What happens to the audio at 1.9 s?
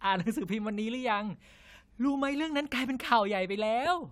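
Nothing goes wrong at 1.9 s; the speech runs through that moment intact, with no dropout, click, distortion or other fault.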